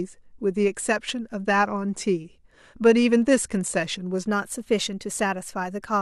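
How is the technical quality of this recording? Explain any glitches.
One glitch stands out: a drift correction step from 4.27 s to the end of the speech clip. Clock-matching software likely changed the playback rate in a single jump to rebalance its buffer. Everything then runs about 6.5% faster, with pitch and speed rising together by roughly 109 cents, a little over a semitone. From 4.27 s the speech sounds abruptly sharper and hurried, and it stays shifted through the final moments of the clip.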